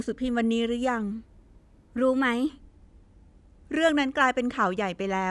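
From 1.12 s to 2.49 s the speech runs at the wrong sample rate: the samples are clocked out faster than they were captured, with no rate conversion in between. Speed and pitch rise together by a factor of 1.09, about 1.5 semitones, so the voice turns slightly higher and hurried for that stretch. The ratio fits audio recorded at 22 kHz being played back at 24 kHz.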